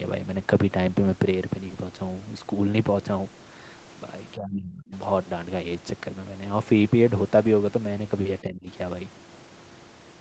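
At 4.35 to 4.93 s and 8.42 to 8.68 s, the speech drops by about 30 dB and then about 20 dB, likely speech suppressed in double talk. The waveform pinches thin and the spectrogram fades.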